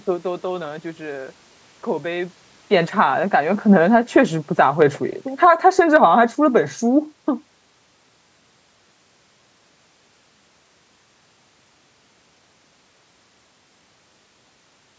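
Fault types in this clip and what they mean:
Automatic gain falling: the automatic gain control judged the input too loud and turned its gain down gradually, so from about 3.02 s to 7.23 s the speech sinks by about 7 dB. It differs from a talker moving away from the microphone, as happens around 2 s and 14 s, because the room noise drops together with the speech: the whole signal is being turned down, not just the sound reaching the microphone.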